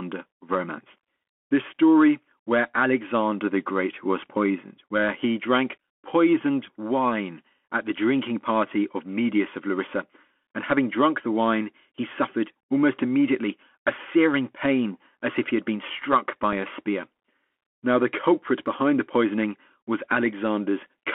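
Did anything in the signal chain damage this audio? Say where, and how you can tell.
Yes. At the codec stage, the whole clip carries Bluetooth CVSD headset codec damage: the band stops near 3.4 kHz, s sounds are scratchy, and granular hiss sits underneath.

On the wireless link, there's a Bluetooth headset packet repeat at 16.53 s, between "he had been struck" and "a spear". It's a small tick where one 3.8 ms packet was lost and the previous packet was replayed in its place.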